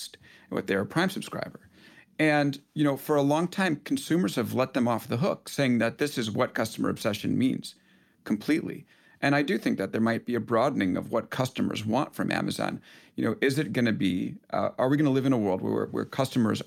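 Speech recording; no technical faults can be heard anywhere.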